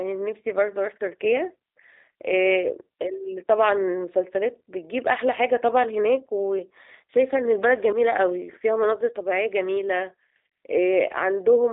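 From start to finish the speech carries G.729 codec damage, plainly audible. Everything's squeezed into roughly 300 Hz to 3.7 kHz, with nothing above 3.8 kHz, and the rebuilt voice sounds rough and a bit synthetic, which fits an 8 kbit/s G.729A coder.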